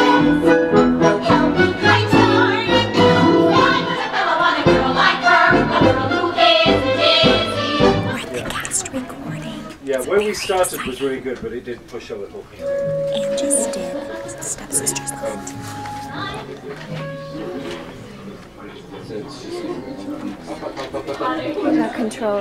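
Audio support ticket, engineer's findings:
No faults found on listening review. Nothing to escalate from the audio side.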